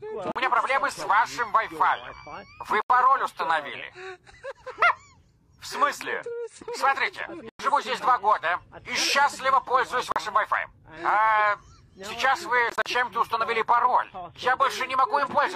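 The sound cuts out briefly five times. At 0.32 s there is a 41 ms hole. At 2.82 s it is 81 ms, and at 7.49 s it is 102 ms. At 10.12 s another 41 ms gap follows. From 12.70 to 12.86 s several short holes are scattered, none longer than 41 ms. Each gap has hard edges or a fade of a few milliseconds. The sound resumes as if it had kept playing. This is likely a Bluetooth dropout: late packets were discarded.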